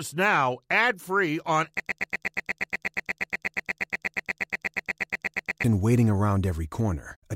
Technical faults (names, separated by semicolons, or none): broken-record loop